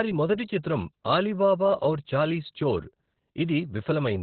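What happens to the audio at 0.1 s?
At 0.1 s the speech is already under heavy Opus voice compression, which runs through the whole clip. The damage fits the SILK linear-prediction mode at a very low bitrate near 8 kbps: the band is cut to narrowband, and the excitation is coded coarsely. The voice sounds muffled, hoarse and slightly robotic. A spectrogram shows a hard ceiling with nothing above about 4.3 kHz, and smeared, grainy harmonics beneath it.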